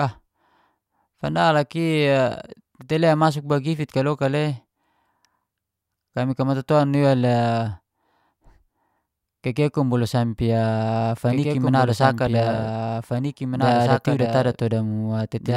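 From 11.31 s to the end, the speech has a doubled audio track. A second copy of the same speech runs about two seconds behind the first. It sits roughly 5 dB below the original. It carries the full frequency range, with no reverb tail or room colour. It cuts in abruptly at 11.31 s. The likely cause is the same signal being captured twice, once through a slower path.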